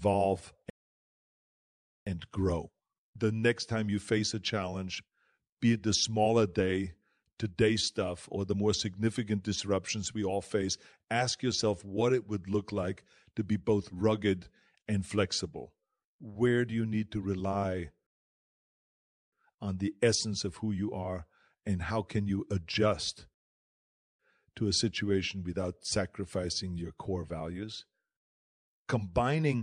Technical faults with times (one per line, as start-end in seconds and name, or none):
0.70-2.07 rebuffering stall
18.07-19.32 rebuffering stall
23.34-24.19 rebuffering stall
28.19-28.69 rebuffering stall